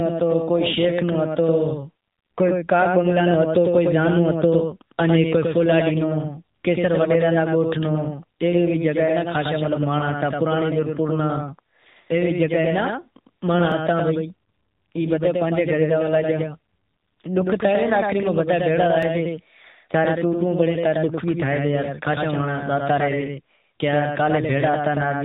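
A doubled audio track runs through the whole recording: a second full-band copy of the speech trails the first by about a tenth of a second, roughly 5 dB quieter, with no decay or room colour. It sounds like a hard slapback, likely from a second, slower capture path mixed back in.

The AMR narrowband mobile codec also shapes the entire clip. Nothing above 4 kHz survives, and the voice has the plainly audible buzzy, synthetic texture of the pulse-driven vocal-tract model, which fits a low-bitrate mode near 8 kbps.

A dropped buffer (overrun) at 13.72 s and again at 19.03 s produces a jump where the sound skips forward. A very brief slice, around a millisecond or two, is missing, and the two sides are joined with no silence, likely because samples were overwritten before the program collected them.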